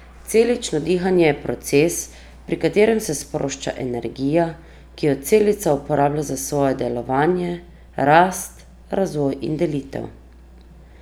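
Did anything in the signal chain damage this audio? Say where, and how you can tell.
Yes: mains hum runs throughout this speech clip, a steady 60 Hz tone about 25 dB below the signal, entering in the analogue wiring via a ground loop or nearby transformer; a spectrogram shows a flat horizontal line at 60 Hz.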